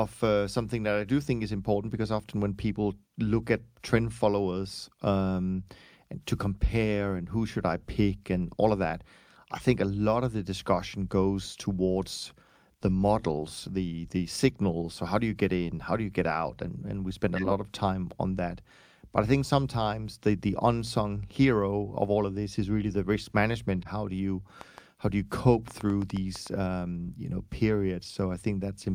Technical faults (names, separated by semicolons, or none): corrupt frame decoded; train of clicks